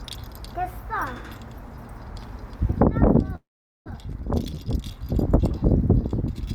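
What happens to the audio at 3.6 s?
At 3.6 s the sound is inside a call audio freeze running from 3.35 to 3.88 s. The last sound is drawn out as a brief fading tail, then about 440 ms of silence follows. When the audio resumes it continues from where it stopped, with nothing missing, so the rest of the clip now runs about 0.5 s later. The likely cause is delayed packets that let the receiver's jitter buffer run dry.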